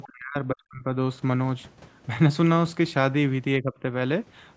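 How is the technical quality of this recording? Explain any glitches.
The speech is marred by two dropouts. Speech suppressed in double talk, from 0.04 to 0.87 s and 3.62 to 3.89 s: the echo canceller likely mistook the talker for far-end echo while both sides spoke, ducking the voice by about 40 dB, then about 15 dB, so it dips.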